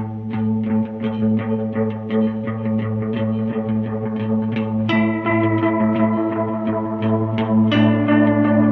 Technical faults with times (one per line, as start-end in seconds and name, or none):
none